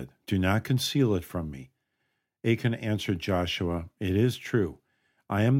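No faults audible in this speech recording; nothing to log.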